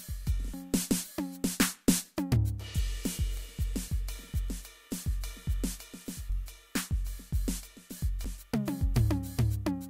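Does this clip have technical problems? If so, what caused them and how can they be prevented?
Yes. Damaged data in a compressed stream causes brief glitches in the music at 0.54, 3.88, 6.30 and 8.25 s, where corrupt frames make the decoder lose sync and hunt for the next header. Checksummed transfers and intact source files prevent it.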